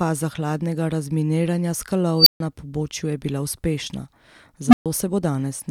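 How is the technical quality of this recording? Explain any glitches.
Two nasty glitches, both from an unstable filter. At 2.18 s a high squeal near 5 kHz swells over about 82 ms, clips, then drops to roughly 140 ms of silence. At 4.67 s a low tone around 200 Hz does the same: it builds over about 63 ms, then goes quiet for about 128 ms. A recursive filter with bad coefficients feeds back on itself until it overflows, the output cuts out, and the filter resets.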